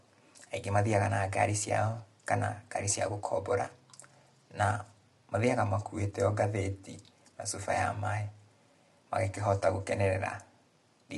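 From start to finish the speech sounds rough and grainy, with hiss filling the gaps between harmonics and nothing above about 11.6 kHz, likely from low-delay AAC compression at a rate that points to roughly 32 kbps. Its short frames blur the harmonic structure. A spectrogram shows smeared harmonic lines, speckled noise between them, and a hard ceiling at 11.6 kHz.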